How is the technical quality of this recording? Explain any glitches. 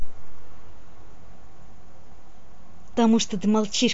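No technical faults are audible.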